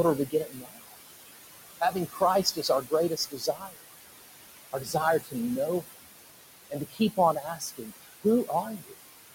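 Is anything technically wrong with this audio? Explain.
Yes, the clip has noise suppressor artifacts throughout, and in five places the suppressor also cuts into the speech.

The noise suppressor artifacts run for the whole clip. The room noise sits only about 9 dB below the speech, so the suppressor works hard, pulling the noise bands down by about 19 dB whenever it judges a frame to be noise. Between phrases the background sinks, then swells back under the talking. On a spectrogram, the gaps show a speckled floor of isolated time-frequency patches. On the waveform, the noise floor pumps up and down with the speech.

Speech cut by the noise suppressor occurs from 0.26 to 0.97 s, 1.8 to 3.84 s, 4.73 to 5.35 s, 6.7 to 7.92 s and 8.23 to 8.93 s. The suppressor mistakes quiet parts of the speech for noise and attenuates them by up to about 18 to 20 dB, over roughly half a second in the first span, about a second in the second, and under a second in each of the others. 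Soft consonants and word endings sound swallowed or faint. On a spectrogram, the weak high-frequency consonant energy and fading tails are clipped away. On the waveform, the envelope drops abruptly toward the floor.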